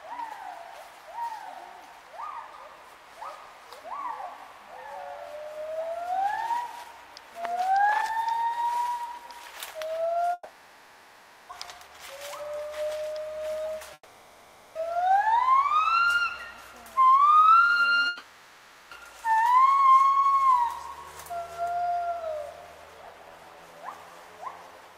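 At 10.33 s the sound gives way to a fading buzz that carries on to 11.51 s, about 1.16 s. The same happens from 13.93 to 14.77 s and from 18.07 to 18.93 s. The likely cause is a long network dropout each time. No audio arrived, so the receiver stretched the last sound to cover the hole. Almost no true silence is left before the audio resumes. The lost material never returns.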